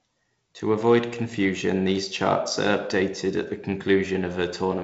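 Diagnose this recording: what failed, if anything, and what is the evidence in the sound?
Nothing in this speech recording has failed at any stage of the chain. The audio stops at 7.7 kHz and carries a light grain of coding noise, which is what working G.722 wideband telephone coding sounds like, and the slightly rougher lower band points to its 48 kbit/s mode.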